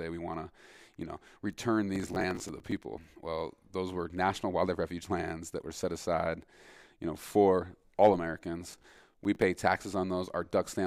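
Processor overload crackle hits at 1.96–2.72 s and again at 8.68–9.42 s: short buffers of around 10 ms miss their deadlines and replay stale audio, giving gritty tearing.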